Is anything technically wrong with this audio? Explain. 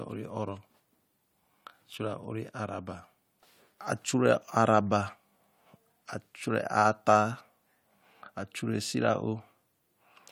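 No technical faults are audible.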